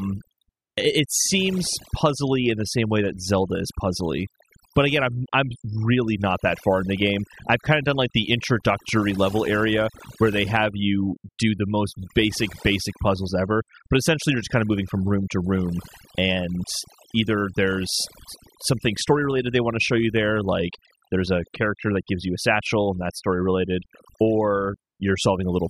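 From start to finish the speech carries overdone noise removal. A noise reduction stage set far too aggressively is attenuating individual frequency bands, sometimes to nothing, whenever their level sits close to its estimated noise floor. Low-level parts of the speech fall below that threshold and are cut along with the noise. Between phrases the background drops to near silence dotted with twinkling specks.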